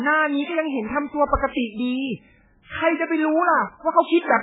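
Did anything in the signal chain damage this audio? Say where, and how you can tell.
Yes. MP3 compression runs throughout the speech, at the codec stage. The treble stops dead at 3.8 kHz, and the heavy watery, swirling texture comes from weak frequency lines flickering between frames, which likely points to a starved bitrate around 8 kbps.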